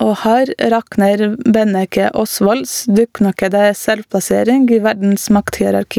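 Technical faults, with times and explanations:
Throughout, gain pumping: the level is pulled down by around 10 dB each time the speech gets loud, so loud and quiet syllables sit squashed close together. The likely cause is input gain set far too high, with a fast limiter clamping down on every loud sound. Unlike a noise gate, the gain is turned down rather than cut to silence.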